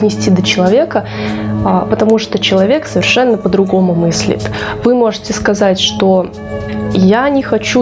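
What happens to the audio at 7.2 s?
At 7.2 s the gain pumping that runs through the whole clip is still present: the gain swings by roughly 15 dB, pulled down under each loud sound so loud and soft parts end up closer in level, likely from gain set far too high feeding a fast limiter. The waveform shows a flattened, squashed envelope with the noise floor rising between peaks, and the spectrogram shows the background brightening and dimming, with the call processing leaving nothing above 8 kHz.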